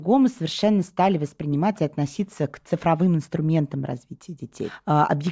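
No technical faults are audible anywhere in this speech recording.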